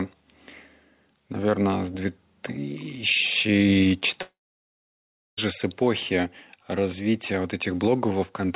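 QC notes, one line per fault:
Throughout: gain pumping. The gain swings by around 10 dB, which squashes loud and soft parts together. The likely cause is gain set far too high, with a fast limiter clamping it down.
4.22 to 5.39 s: long network dropout. About 1.16 s of audio is missing; the gap opens with a short fading continuation of the last sound, then roughly a second of silence until the sound resumes, the lost stretch never replayed, likely from packets not arriving.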